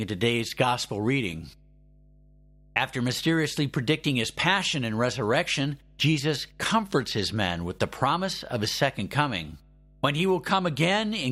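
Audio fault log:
Throughout, mains hum: a steady low 50 Hz drone sits under the speech, about 30 dB below it. Power-line current is leaking into the signal, through a ground loop or a nearby transformer, adding a constant tone with some low harmonics.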